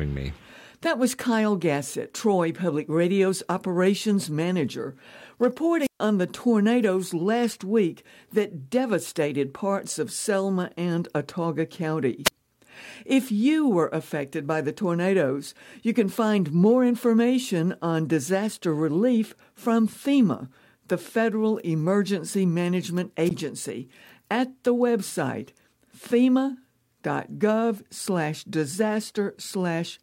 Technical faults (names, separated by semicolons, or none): wireless microphone squelch dropout